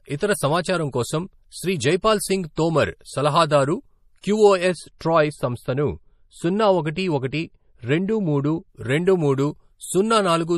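Throughout the speech there is plainly audible codec damage. Its cause is likely MP3 compression at a low bitrate, one that fits about 40 kbps. Nothing is left above 14.9 kHz, so the treble is cut off sharply there. Below that, weak frequency lines drop in and out from frame to frame. The result is a watery, swirly texture on the speech, and attacks are smeared.

Pre-echo appears at 2.02 s and again at 2.55 s, each about 16 to 17 ms long. A third instance runs from 4.21 to 4.24 s, spread over 25 ms. The codec spread its quantisation noise across a whole block. A sharp onset fell late in that block, so noise sized for the loud part leaked into the quiet moment before it. Each attack is preceded by a brief hiss and sounds softened.

From 4.71 to 8.70 s, de-emphasis has been applied wrongly. A treble cut meant to undo pre-emphasis reached speech that never had any, or was applied twice. The response slopes smoothly downward, reaching about 13 dB down at 10 kHz against 1 kHz. 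The speech turns dull and muffled for that stretch. Inside it, at 4.98 to 5.01 s, another pre-echo spreads over 26 ms, with the same short hiss before the attack.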